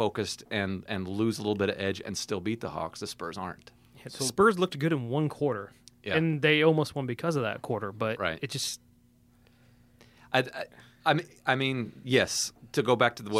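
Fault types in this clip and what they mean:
No technical fault can be heard anywhere in this speech recording. There is nothing here to list under any fault type.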